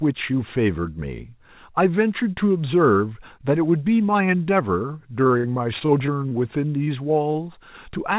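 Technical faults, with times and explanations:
5.24 to 6.39 s, repeated packet loss (robotic sound): packets kept going missing, and each gap, the longest about 61 ms, got patched from the last sound, so this stretch turns choppy and robotic.
6.84 s and 7.33 s, short concealed packet loss: two quick dropouts of about 20 ms each, filled in by extending the preceding sound and blending back, heard as brief smears or wobbles.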